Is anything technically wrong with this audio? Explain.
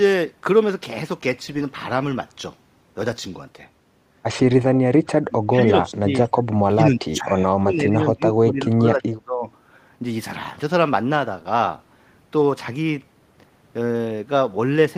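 Yes. From 4.62 s to 9.46 s the speech keeps sinking and breaking up, in some moments falling by something like 30 dB, and for about four seconds of that span it is dipped, dulled or cut into fragments. This is speech suppressed in double talk, likely caused by both sides talking at once: the echo canceller could not separate this talker from the returning loudspeaker echo, so it attenuated everything together.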